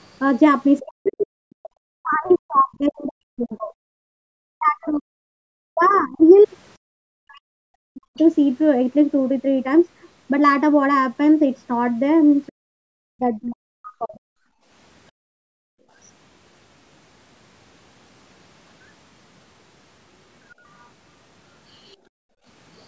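From 0.8 to 8.18 s the echo canceller likely failed to separate the talker from loudspeaker echo, causing speech suppressed in double talk: the speech dips and breaks up for around five seconds in total, dropping by as much as about 40 dB. Within that span, from 1.08 to 2.35 s, incomplete echo removal likely lets the other side's voice leak through, faint at about 30 dB below the speech. It briefly recurs from 8.17 to 8.23 s. From 12.47 to 15.51 s the same double-talk suppression likely returns, cutting the speech in pieces that total about a second and a half, again dropping by about 40 dB. From 14.48 to 15.9 s the canceller clamps the microphone while the loudspeaker plays, so the background is gated by the echo canceller and the room sound drops by about 20 dB for a fraction of a second. From 20.79 to 21.95 s the other side's voice likely leaks through again, very faint at about 40 dB below the speech. 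Immediately after, from 21.96 to 22.45 s, the background is gated once more, dipping by about 32 dB for roughly half a second.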